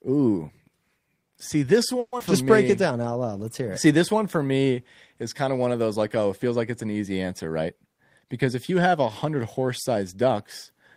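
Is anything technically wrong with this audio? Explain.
Yes, there are three faults in this speech.

Long network dropout, 1.99 to 2.22 s. The sound is carried on as a fading buzz for about 210 ms, drops to silence for about 40 ms, then resumes with roughly 100 ms missing. The likely cause is a gap in arriving audio: the receiver stretched the last sound to cover the hole, ran out of anything to play, and then picked up further on. The delay appears to have shifted by around 50 ms across the gap.

Jitter buffer slow-down, 2.41 to 3.28 s. Right after the gap, the buffer needed to rebuild its reserve, so the receiver repeated single pitch periods and slivers of pause many times over. That added about 92 ms, and the speech runs at about 90% speed with its pitch unchanged. Sounds come out drawn-out and slightly dragged.

Jitter buffer speed-up, 7.47 to 9.26 s, starting just after "like it's an easy". 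Here the buffer held more audio than its target, so the receiver trimmed short pieces of one or a few pitch periods repeatedly to cut the delay. Around 150 ms is removed, and the speech plays at about 108% speed at the same pitch. The result sounds hurried, as if the talker briefly rushed.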